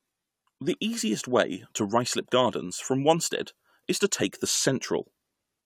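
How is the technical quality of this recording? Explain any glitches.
No glitches or faults detected.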